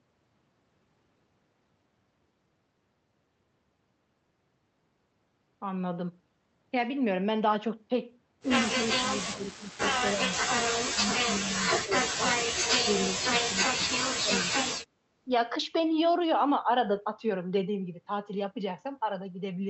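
Speech suppressed in double talk, likely from the echo canceller, pulls the voice down by up to about 35 dB at 8.76–9.84, 10.01–10.3, 11.83–14.04 and 14.22–14.69 s. Unlike packet-loss gaps, these are uneven dips and broken fades rather than clean silences.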